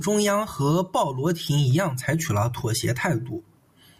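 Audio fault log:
No audible faults detected.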